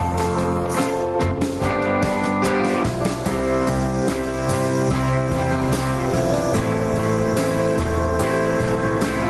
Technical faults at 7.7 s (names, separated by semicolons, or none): gain pumping